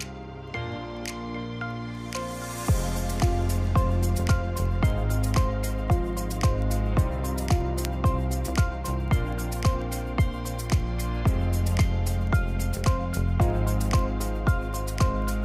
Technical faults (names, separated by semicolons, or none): word clock ticks